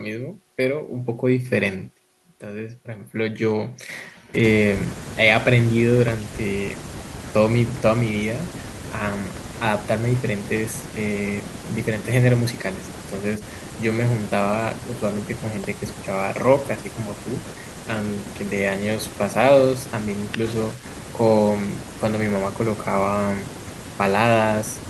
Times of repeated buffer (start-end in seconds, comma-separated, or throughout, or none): none